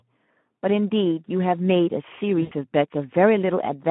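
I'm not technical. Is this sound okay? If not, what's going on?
No. The whole clip carries Speex codec damage. Speex is an older internet-calling speech codec, and here it squeezes the voice hard. The speech sounds noticeably hoarse and grainy. It is also limited to a phone-line range of roughly 150 Hz to 3.4 kHz, so it sounds thin and muffled.

From about 2.41 to 2.53 s there is VoIP packet loss concealed by the speech codec. Around a tenth of a second of audio never arrived. The decoder filled the gap by stretching the last sound it had, so it turns into a brief buzzy or noisy, fading smear instead of clear speech.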